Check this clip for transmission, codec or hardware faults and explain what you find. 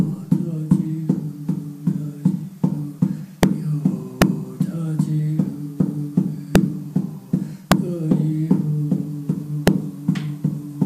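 Integer overflow cracks appear at 3.43, 4.22, 6.56, 7.72 and 9.68 s. Peaks pushed about 1 to 2 dB past full scale wrapped to the opposite sign instead of being limited, producing violent cracks far sharper than clipping.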